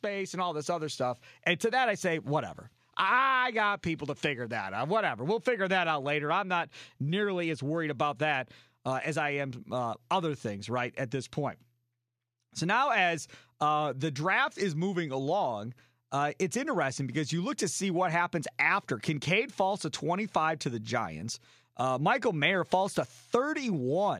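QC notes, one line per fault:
0.05–1.08 s, automatic gain rising: the gain control judged the opening input too quiet and pushed its gain up by about 5 dB over roughly a second, so the speech and the background noise beneath it swell together rather than the level jumping at once.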